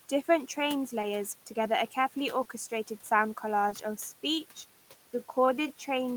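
At 1.01 to 1.05 s, just before "together a carefully", and again at 2.43 to 2.47 s, right after "together a carefully", there is short concealed packet loss. About 20 ms of audio reached the decoder too late, and the receiver continued the preceding sound to fill the hole before blending back, leaving a brief smear or wobble.

From 3.47 s to the end, the pace suddenly drops to about 0.74 times normal speed while the pitch holds steady. This is likely a time-stretched section, lengthened by repeating short slices of audio, which makes the speech sound drawn out. Inside it, at 3.69 to 3.73 s, a third concealed loss covers another 20 ms gap the same way, heard as a further momentary smear.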